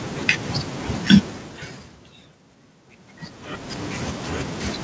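No technical faults can be heard in this speech.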